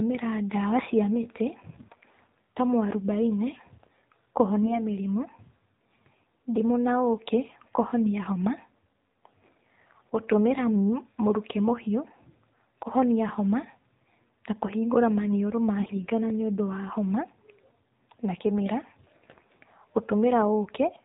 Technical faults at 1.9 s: AMR narrowband mobile codec; AMR bit errors

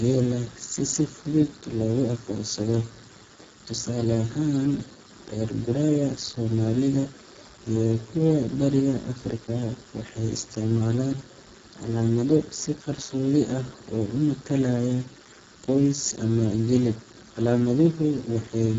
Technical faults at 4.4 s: Speex codec

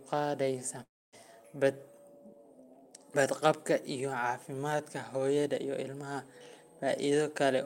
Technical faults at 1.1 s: long network dropout

